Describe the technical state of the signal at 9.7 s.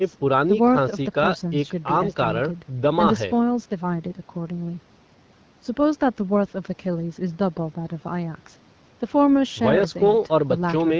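At 9.7 s the audio is intact, with no fault at that moment.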